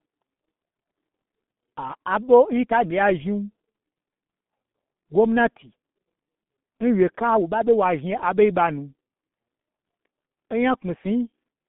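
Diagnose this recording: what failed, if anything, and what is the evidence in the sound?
The failure is at the codec stage: the whole recording passed through the G.723.1 codec with heavy damage. The speech is muffled and hoarse from start to finish, with smeared consonants, which fits a rate of about 6 kbit/s. On a spectrogram there is a flat ceiling near 3.8 kHz and nothing above it, with the line band between 150 Hz and 3.6 kHz. The codec rebuilds speech from a coarse vocal model that updates only once per 30 ms frame, so fast transitions blur together.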